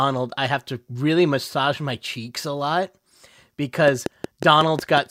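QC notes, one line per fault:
3.88–4.99 s, train of clicks: about seven evenly spaced ticks at 5.5 per second, peaking roughly 10 dB over the speech, likely from interference by nearby equipment.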